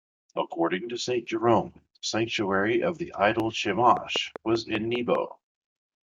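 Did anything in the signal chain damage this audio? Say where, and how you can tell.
Yes. Right after "sanctuary of the idol", from 3.97 to 5.16 s, there's a train of clicks, about seven similar pops at a steady 5.06 per second, peaking about 10 dB above the speech. That regular, uniform pattern likely points to interference leaking into the analogue wiring.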